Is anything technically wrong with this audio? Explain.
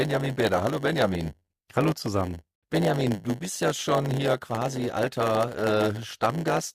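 Yes, there's a block size mismatch (padded) running through the whole clip. One stage is handing over blocks that are a bit shorter than what the next stage expects, and the leftover space in each block gets filled with silence. Those tiny gaps repeat 100 times a second, so you hear a steady 100 Hz buzz riding on the sound. Because every block is stretched with padding, everything plays at about 0.92 times normal speed, yet the pitch stays roughly where it should be.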